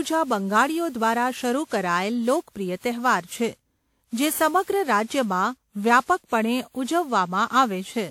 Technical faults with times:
0.00-8.11 generation loss

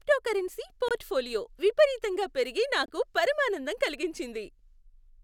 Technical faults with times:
0.88-0.92 Bluetooth dropout
2.86-2.90 Bluetooth dropout

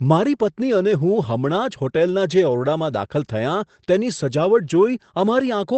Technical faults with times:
none

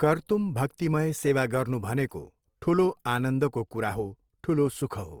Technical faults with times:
0.00-5.20 Opus compression

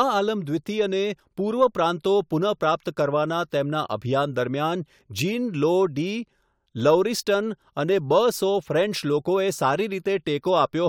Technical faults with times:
none

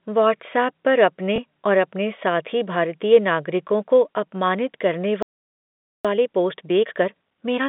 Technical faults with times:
1.36 packet loss with last packet repeated
3.68 packet loss with last packet repeated
5.23-6.05 playback stall
6.05-7.69 time-compressed catch-up

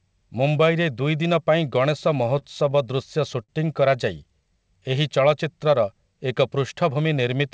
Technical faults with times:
2.39-2.99 repeated stalls (stutter)
3.43-3.50 short stall from a late packet

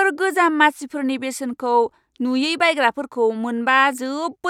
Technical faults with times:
none

